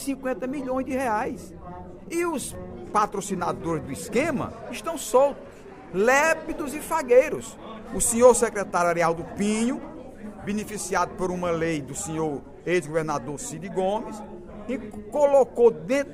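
No technical faults can be heard anywhere in this audio.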